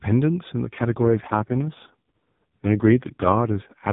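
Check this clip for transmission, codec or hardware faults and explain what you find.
One fault: an AMR rate drop from 0.64 s to the end. The speech turns rougher and buzzier, which fits the mobile codec falling from 12.2 to 4.75 kbps to protect a weak link. On a spectrogram the 4 kHz band edge stays put with no gap, but harmonics blur and noisier.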